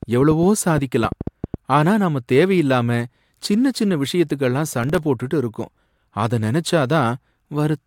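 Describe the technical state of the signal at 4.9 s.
At 4.9 s the speech is inside a burst of processor overload crackle running from 4.72 to 5.03 s, between "சின்ன சின்ன விஷயத்துக்கெல்லாம்" and "போட்டுட்டு இருக்கோம்". Around ten missed buffer deadlines, each leaving a hard-edged silent gap of roughly 1.5 ms, produce a gritty tearing over the speech.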